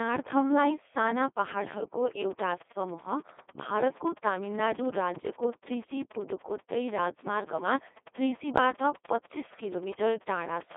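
The whole clip runs through a Codec 2 vocoder, and it's heavily damaged. Only pitch, voicing, energy and a spectral envelope get through, so the decoder rebuilds the voice from sine waves, leaving it robotic and buzzy. The band runs from about 250 Hz to 3.6 kHz, with nothing above 3.8 kHz, and the codec runs at 2.4 kbit/s.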